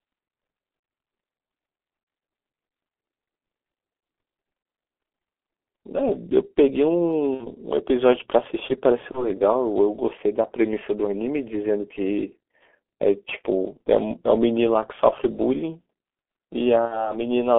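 From start to finish the speech sounds muffled, thin and hoarse, with smeared consonants and a rough grain. This is G.723.1 codec damage, and it is heavy. The audio sits in a telephone band of roughly 250 Hz to 3.4 kHz, so everything above that is gone. The coarseness points to the 6.3 kbit/s mode. The codec models the voice in 30 ms frames and updates that model slowly, so fast articulation blurs.

At 7.35–7.51 s, 9.11–9.28 s and 16.86–17.14 s the speech briefly turns into a smeared, buzzy tone or coloured noise that fades, then recovers weak or distorted before it steadies. This is VoIP packet loss concealed by the speech codec. The decoder filled each gap by stretching its last pitch and filter settings while lowering the gain. The first and last gaps fit about 60 ms of lost audio, and the middle one about 30 ms. The decoder builds each frame on the one before, so the effect lingers past each gap.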